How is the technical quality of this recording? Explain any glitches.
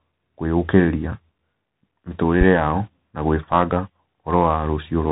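Technically it's rough: the speech has gone through a narrowband Bluetooth link the whole way, and there's one loud pop partway in.

Throughout the clip you can hear the Bluetooth CVSD headset codec at work. Nothing gets through above about 3.8 kHz, so the speech sounds boxed-in and telephone-like, which fits a 64 kbps CVSD stream. CVSD sends only an up-or-down bit each sample with an adapting step size, and that leaves a grainy hiss under everything. The s sounds come out scratchy, and loud bright moments distort because the step can't keep up.

From 2.41 to 2.45 s there's a loud pop, a single sharp hit sitting roughly 10 dB above the speech, with the talking carrying on underneath it. A sudden voltage step or spike got added to the signal, likely from a plug, switch, static discharge or driver glitch, and the circuitry after it shaped that spike into the short, hard click you hear.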